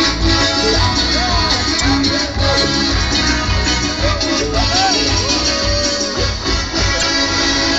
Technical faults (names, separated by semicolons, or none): damaged data in a compressed stream